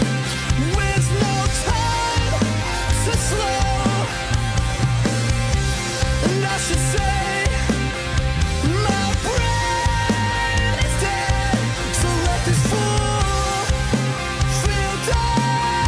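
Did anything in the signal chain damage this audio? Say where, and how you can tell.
No, nothing in the signal chain left an audible mark on this audio; there is no sign of damage at any stage.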